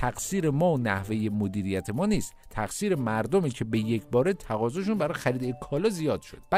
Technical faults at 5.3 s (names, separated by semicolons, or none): none